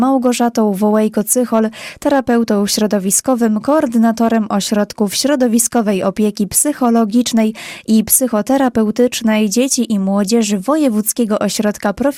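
Brief crackles sit on the loudest peaks throughout the audio, the mark of hard clipping. The signal was driven about 4 dB past what one stage could pass, so those peaks were cut flat, adding high harmonics. Only a small fraction of the waveform is affected.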